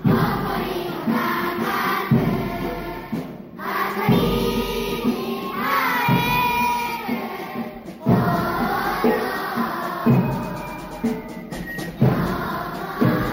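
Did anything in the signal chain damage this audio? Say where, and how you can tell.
Yes. The damage is imaging from sample-and-hold upsampling, at the rate conversion stage, and it runs through the whole clip. A bright metallic fizz rides on top of the sound and rises and falls with its level. The audio was raised from 16 kHz to 48 kHz by repeating each sample, with no smoothing filter. That leaves mirror copies of the spectrum. The first sits between 8 and 16 kHz, about 20 dB below the signal.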